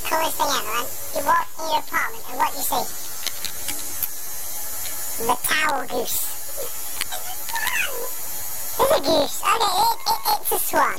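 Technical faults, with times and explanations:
Throughout, planar audio read as interleaved: each 21.77 ms block replays twice at double speed, one channel then the other, giving an octave-up sound with a buzz near 46 Hz.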